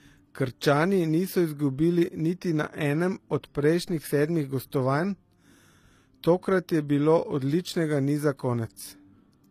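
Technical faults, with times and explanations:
Throughout, transcoding between lossy codecs: nothing above 14.9 kHz, with the artefacts of both codecs heard together on the speech. It fits a 96 kbit/s MP3 likely re-encoded as 24 kbit/s HE-AAC, the second codec stacking its artefacts onto the first's.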